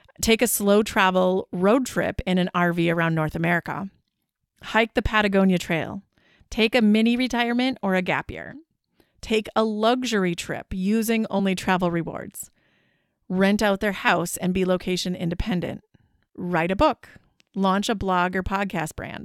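At 11.33 to 11.40 s, between "a luxury trip using" and "travel rewards", compressed frames are skipped: the decoder drops frames, so about 20 ms of speech never plays. The speech jumps ahead across the gap.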